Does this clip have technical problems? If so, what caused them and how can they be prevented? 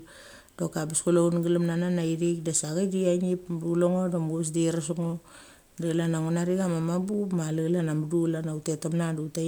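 Yes, periodic USB or driver dropouts: from 5.03 to 7.20 s, right after "de iresk", regular ticks arrive every 64 ms while the speech runs, as a blocked bus skips a sliver of audio each time. Prevent it by removing background USB load and enlarging driver buffers.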